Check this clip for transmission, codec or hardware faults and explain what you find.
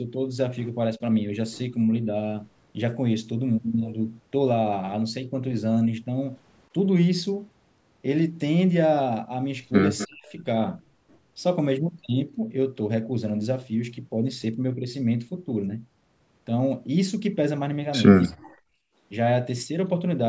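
There are two kinds of fault here, both typical of a speakerphone call.

Speech suppressed in double talk, at 0.97–1.01 s, 10.06–10.37 s and 18.28–18.6 s. The speech briefly dips by about 10 dB, then drops out almost entirely, by about 40 dB. This is likely because the echo canceller turned down both its own talker and the loudspeaker echo while both sides talked.

Echo leak, at 9.98–10.07 s. A faint copy of the speech comes back about 252 ms late, roughly 15 dB down. It's likely residual loudspeaker echo that the loudspeaker side's canceller missed.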